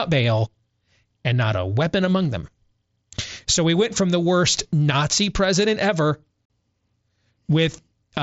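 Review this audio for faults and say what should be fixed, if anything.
Unconcealed Bluetooth headset packet loss cuts the speech from 6.45 to 6.50 s, just after "president ever". A 45 ms hole opens with abrupt edges. That length fits about six lost packets between headset and phone. Silence or an idle pattern fills the gap instead of concealment. To prevent it, keep the headset close to the phone, reduce radio interference, and enable packet loss concealment on the mSBC link.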